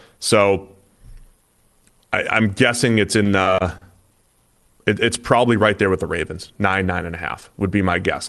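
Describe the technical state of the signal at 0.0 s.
At 0.0 s the speech signal is intact, with no dropout, click, distortion or other fault at that moment, and the call path's ordinary band-limiting present as usual.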